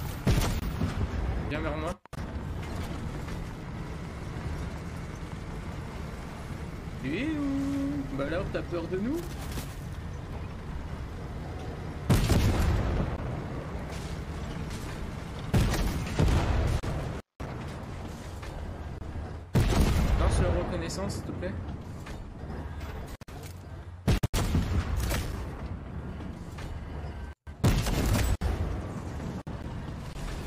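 A regular train of clicks runs from 0.05 s to 6.06 s, about thirty of them ticking at 5.51 per second, each roughly as loud as the sound itself. Likely interference from nearby gear or a faulty connection or power supply.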